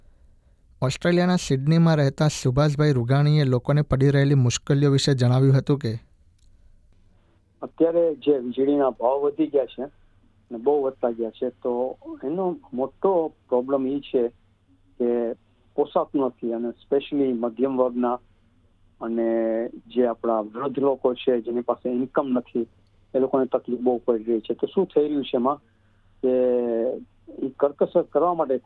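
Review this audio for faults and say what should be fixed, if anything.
No faults turned up in this audio, so nothing needs to be fixed.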